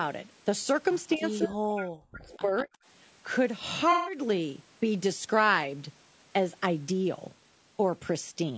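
Throughout, the speech is rough and grainy, with noise filling the gaps between harmonics. This is likely low-delay AAC compression (AAC-ELD) at a rate that fits about 32 kbps. Unlike band-limiting from the call microphone processing, which simply leaves nothing above 8 kHz, this grain sits inside the voice itself.

At 1.16–1.24 s the voice briefly dips by about 15 dB. From 1.43 to 2.71 s it is pushed down much harder, by up to about 40 dB, and it cuts out in pieces for roughly a second in total. This is likely speech suppressed in double talk: an echo canceller turned the talker down while the far side was also speaking. It differs from a dropout because the sound is attenuated in uneven chunks rather than gapped cleanly.

Overlapping this, at 1.37–1.48 s, 2.26–2.39 s and 2.57–2.63 s, a delayed copy of the voice trails by about 193 ms. The first scrap is strong, at only about 5 dB under the speech. 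The later two are faint, at about 25 and 30 dB down. This is likely echo leak from a loudspeaker on the far side. The fixed delay sets it apart from reverberation.

At 3.92–4.18 s, about 150 ms of audio is lost to AAC frame loss with concealment. The decoder rebuilds the gap from the last good spectrum, so it sounds like a smeared, phasey patch rather than a silent hole.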